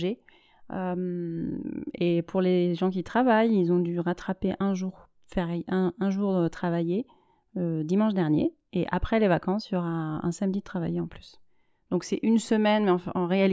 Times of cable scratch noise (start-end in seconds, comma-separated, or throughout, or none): none